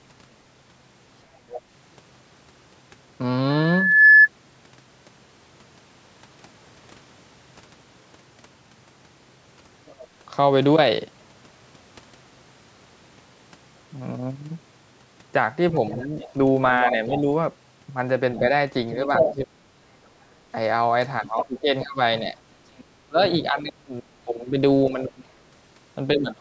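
At 1.50 to 1.61 s, a brief scrap of a second voice comes through well below the main speech, about 15 dB down. This other side's voice leaking through is likely an echo canceller failing to strip the loudspeaker's playback from the microphone signal.

From 3.49 to 4.28 s, a loudspeaker feedback squeal takes over. The microphone picks up a loudspeaker carrying its own output, and at 1.7 kHz the loop gain climbs past unity. That single tone swells over roughly half a second until it sits about 10 dB above the signal, a piercing whistle riding on the sound.

The leakage returns at 9.86 to 10.07 s as a faint fragment, about 25 dB down. From 15.90 to 19.35 s it becomes a sustained second voice as loud as the talker, likely residual echo the canceller left almost entirely untouched.

Overlapping that, from 16.04 to 19.72 s, the speech is suppressed in double talk. With both sides active, the canceller likely could not separate its own talker from the echo and pulled the whole signal down. 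The talker's voice drops in pieces, by as much as about 35 dB, for around a second in total.

From 21.25 s to the end of the clip, the same suppression recurs, with dips of about 20 dB adding up to around two seconds. Within that stretch, from 21.38 to 23.48 s, the leaking voice is heard again, about 10 dB below the speech.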